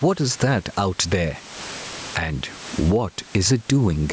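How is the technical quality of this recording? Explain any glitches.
The recording suffers from gain pumping that runs through the whole speech clip. The input gain was likely set far too high for the microphone, so a fast limiter or compressor clamps down on every loud syllable and lets go in the pauses. The level swings by around 20 dB. The room noise sits about 33 dB below the speech, loud and soft parts end up closer in level, and the speech sounds squashed. The call's microphone processing, with nothing above 8 kHz, sits beneath this.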